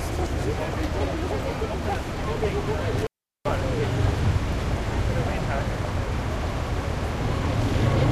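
A recording of everyday sound with an intermittent contact fault between 2.98 and 3.52 s: a loose cable or plug breaks the signal path, crackling at each edge of the dropout, and the audio goes out for about 386 ms, leaving faint hiss until contact returns.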